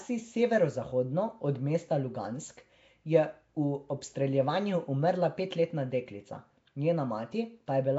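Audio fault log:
Throughout, Nellymoser compression: the speech carries a rough, hissy halo and a smeared, underwater quality, likely from Nellymoser Asao coding at a low fixed rate, which fits about 32 kbps. Weak bands get no bits and are refilled with noise, so detail turns to grainy texture. On a spectrogram, energy stops sharply at about 7.7 kHz, harmonics look blurred in blocks, and speckled noise fills the gaps between formants.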